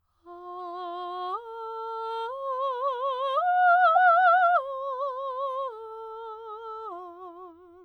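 At about 3.95 s there's a corrupt frame decoded in the music: one compressed frame arrived with flipped bits and the decoder played it anyway, so misread gains scatter energy into the wrong frequencies. You hear a short chirp, squeak, blip or burst of noise, peaking somewhere around -15 dBFS.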